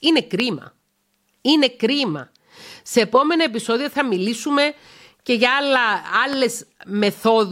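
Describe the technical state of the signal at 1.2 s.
At 1.2 s the speech signal is intact, with no technical fault at that moment.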